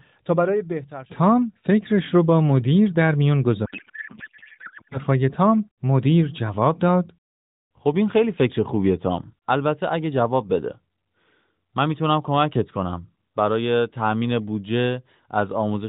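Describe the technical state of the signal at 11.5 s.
At 11.5 s the signal is intact, with no fault present beyond the narrowband character of the AMR-NB mobile codec path, which at 12.2 kbps leaves the speech band-limited to below 4 kHz with only light coding damage.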